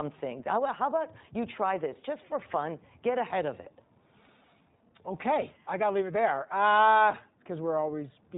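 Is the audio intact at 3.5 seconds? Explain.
No. At 3.5 seconds the speech carries iLBC codec damage, and it runs through the whole clip rather than just this moment. Nothing above 4 kHz survives, so the sound is narrowband and dull at the top. Each short frame's excitation is coded on its own, without help from the previous one. That leaves a plainly audible rough, slightly synthetic texture. The sound fits 20 ms frames at about 15 kbps.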